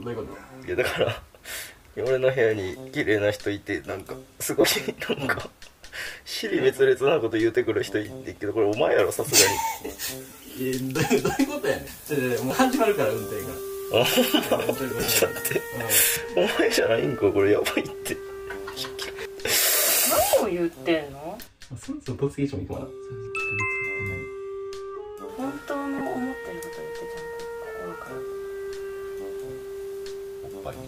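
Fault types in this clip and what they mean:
lost LE Audio frames: Bluetooth LE Audio frames went missing, and the decoder filled each gap by repeating the last spectrum with random signs. Brief noisy smears of 22.5 to 30 ms occur at 4.61, 10.29, 20.30 and 25.98 s, plus a scattered 90 ms patch near 15.0 s.
pre-emphasis left on: The treble boost applied before transmission was never undone by a matching cut. From 8.99 to 16.16 s, 10 kHz sits about 13 dB above 1 kHz, fitting a 75 µs FM curve. The sound turns thin, bright and hissy.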